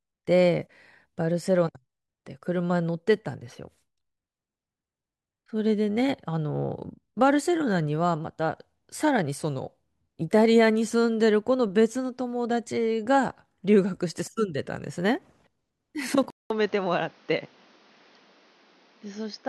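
At 16.30 s, after a 200 ms gap, speech turns dull and quieter, likely an input switched to a poorer device; the spectrogram empties above 6.6 kHz.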